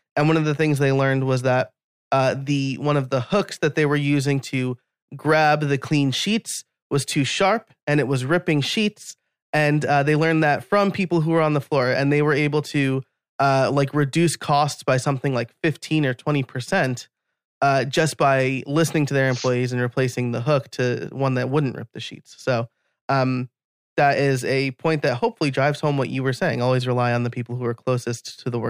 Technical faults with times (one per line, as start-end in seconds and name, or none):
none